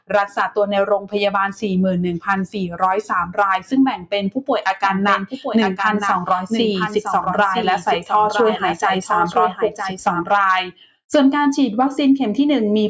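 A noise suppressor built for speech, applied to music or sounds, runs throughout. It mistakes steady tones and tails for noise and pulls them down. Level swings by around 10 dB, so the sound pumps and thins while attacks pass through.

Sound is cut by the noise suppressor at 0.0 to 0.38 s, 0.99 to 1.15 s, 2.47 to 2.82 s, 3.02 to 3.38 s, 3.96 to 4.13 s, 5.3 to 5.45 s, 9.52 to 9.81 s and 10.64 to 11.1 s. Held parts sink by about 10 to 17 dB. Decays are chopped short.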